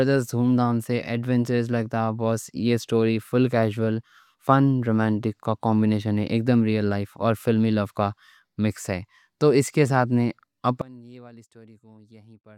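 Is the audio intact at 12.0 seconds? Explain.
No. From 10.82 s, just after "اس کے ساتھ نے", to the end at 12.57 s, the speech falls by about 25 dB to a faint residue. One channel inverted is the likely cause, cancelling the centred voice when summed to mono. Unlike a dropout, some faint sound remains.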